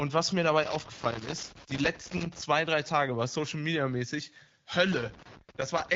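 Loose connector crackle starts at 0.63 s, just after "was mir", and runs to 2.41 s. A worn contact keeps making and breaking, chopping the signal into irregular crackle and scratching. It returns from 4.92 s to 5.95 s. The AMR wideband path sounds clear, which fits about 12.65 kbit/s.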